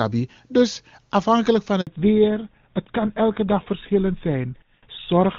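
Right after "afhankelijk van", at 1.81 s, the audio simply stops for about 60 ms, until 1.87 s. That's a handover gap: the phone was moving the call from one network to another, and during the switch no speech frames came through at all. You hear the voice cut out almost instantly, then a short hole of silence before the new link picks up. Whatever was said in that sliver is just gone.

From 1.87 s to the end, there's a fallback to narrowband. Up to the gap, the HD Voice link sounds clean and full, but after the switch everything above 4 kHz is missing. The sibilants lose their sparkle and the voice turns duller and rougher, with that boxy, old-phone quality. The change lines up with the handover and fits the call dropping from AMR-WB to GSM full rate, an older codec that can't carry anything past 4 kHz.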